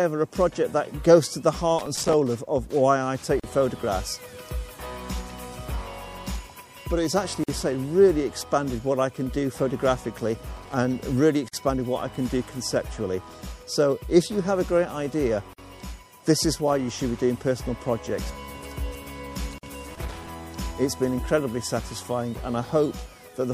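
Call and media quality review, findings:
Watery, swirly texture throughout, treble dulled above a fixed ceiling, high-frequency detail chirping and attacks smeared. Likely MP3 compression at low bitrate; damage consistent with about 64 kbps. Starved encoder drops the top band and zeroes weak frequency lines, which switch on and off frame to frame and produce the swirl.

Irregular crackle/scratch bursts at 1.79–2.14 s, 10.57–10.74 s, 19.91–20.34 s. Loose connector crackle: worn or dirty contact making and breaking as it moves, chopping the signal, with pops from any DC on the line. Check cable and jack.

Brief dropouts at 3.40 s (39 ms), then 7.44, 11.49, 15.53, 19.58 s (49 ms each), spaced every 4.0 s; sound resumes where it stopped. Gap at a join of encoded pieces: separately encoded segments concatenated untrimmed, with encoder start delay and last-frame padding left in.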